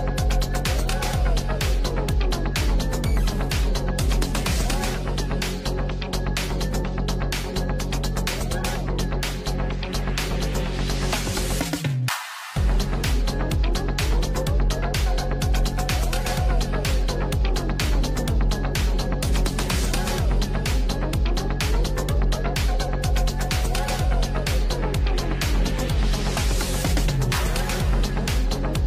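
No technical faults occur at any point in the audio.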